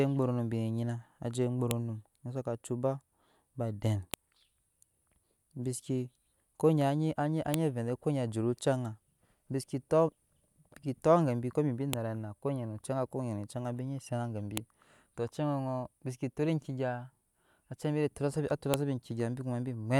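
File header played as audio, heard at 1.71, 4.14, 7.54, 11.93, 14.57 and 18.74 s: the speech was assembled from separate WAV pieces joined without stripping their headers, so each piece's header bytes are decoded as sample values. The result is a brief, sharp, loud click or snap at each join. It cuts straight through the speech at those six points, regardless of what the audio around it is doing.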